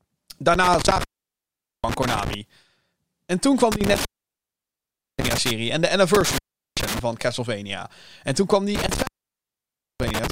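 The speech drops out four times, each gap framed by crackle and leaving faint hiss: from 0.54 to 2.34 s (open for about 0.79 s), 3.72 to 5.51 s (1.14 s), 6.14 to 6.99 s (0.39 s), and 8.75 to 10.31 s (0.93 s). This is an intermittent contact. A loose cable or plug briefly breaks the signal path, and the scraping contacts produce the crackle at each edge.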